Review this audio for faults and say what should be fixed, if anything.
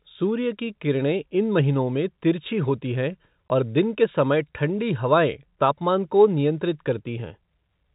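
At 3.49 s the speech drops out abruptly for a short gap with hard edges on either side. This is packet loss filled with silence: the receiver had nothing to play for one stretch and substituted silence rather than concealing the gap. The hole is about 20 ms, which fits a single lost 20 ms packet on a G.711 telephone coding path, whose 4 kHz bandwidth limit is audible throughout. Enabling packet loss concealment at the receiver, with a jitter buffer sized for the network, would prevent the silent gap.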